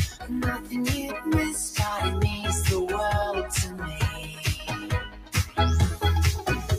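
A noise suppressor built for speech has been left running on this non-speech audio, so it treats steady or sustained parts of the sound as noise and pulls them down. Across the clip the level swings by roughly 10 dB as the processing bites and releases. Onsets come through intact while what follows sinks, which gives the audio a pumping, thinned-out feel rather than a natural decay.

You can hear the sound cut by the noise suppressor most clearly in three places. From 0.08 to 0.31 s it dips by about 10 dB, and from 0.58 to 0.73 s by about 9 dB. Those two are quick, lasting only a couple of tenths of a second each. The longest stretch runs from 3.67 to 5.58 s, with the drop reaching about 11 dB over roughly a second and a half of it. Sustained or fading material there gets squashed or has its tail cut short.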